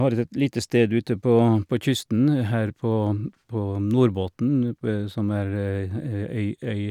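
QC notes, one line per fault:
Throughout: resampler restarted on every block. A faint tick recurs every 40 ms, a 25 Hz pattern that merges into a rough buzz under the speech and drops away in pauses. Each short block was rate-converted in isolation, fitting a 44.1 kHz to 48 kHz conversion, so its edges were filtered against missing neighbours and left a small error at each seam. A spectrogram shows thin vertical broadband lines spaced 40 ms apart wherever there is signal; the waveform shows small kinks at those seams.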